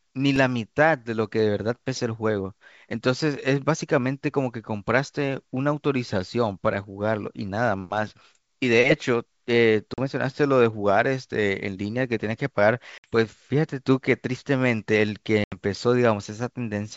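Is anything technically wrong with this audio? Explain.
Yes, there are two kinds of fault in this speech.

At 0.36 s there is a tiny click, almost a brief buzz. This is a repeated buffer: fresh audio arrived late, so the device played its last 2.9 ms block once more. The hard join at the repeat causes the click, and that length fits a buffer of about 128 samples.

Near 9.94 to 10.06 s, 12.98 to 13.09 s and 15.44 to 15.57 s the sound drops into sharp-edged silent gaps of 40, 60 and 80 ms. Each gap is followed by some distortion before the sound settles. This is packet loss on an ADPCM call. The missing packets were replaced with silence, so the receiving decoder's adaptive predictor and step size drifted from the sender's. The audio therefore resumes slightly distorted until the two resynchronise.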